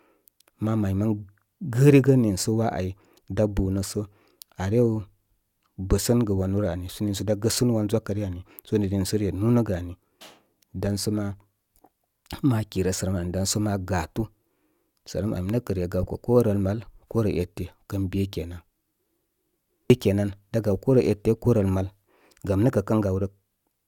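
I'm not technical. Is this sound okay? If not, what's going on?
Yes, nothing in this speech recording points to a technical problem, so there's nothing to fix.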